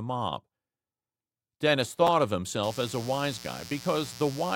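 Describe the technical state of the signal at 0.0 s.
At 0.0 s the signal is intact, with no dropout, clipping, distortion or other fault audible at that moment.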